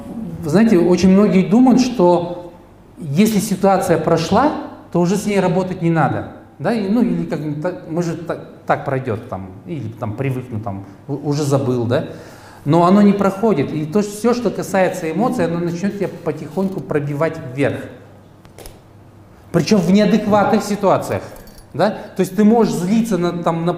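No technical faults can be heard anywhere in this recording.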